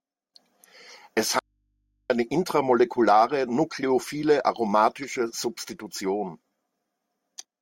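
At 1.39 s the speech cuts off abruptly and only a low mains hum, roughly 50 dB below the voice, remains until 2.10 s, when "eine intramolekulare" snaps back in. This audio dropout to a faint residue likely came from the signal being lost while the input stayed live.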